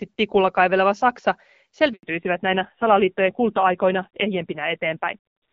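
At 1.93 s a handover gap cuts the speech for 100 ms, until 2.03 s. No frames arrived while the call switched links, leaving a flat, empty stretch in the waveform.

From 2.03 s a fallback to narrowband dulls and roughens the speech, which had been clear wideband audio consistent with AMR-WB near 12.65 kbit/s. The spectrogram shows nothing above 4 kHz from then on, which fits a drop to a low-rate AMR-NB codec.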